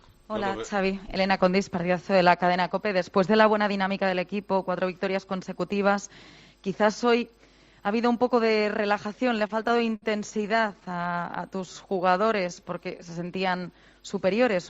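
Repeated stalls (stutter) from 9.39 to 11.10 s: packets arrived late, the jitter buffer emptied 22 times, and the last sound was stretched over each gap, up to 63 ms, so the audio drags without losing anything. A jitter buffer slow-down follows from 11.57 to 12.89 s, where repeated pitch periods add 159 ms, leaving the sound at 88% speed and drawn out at unchanged pitch.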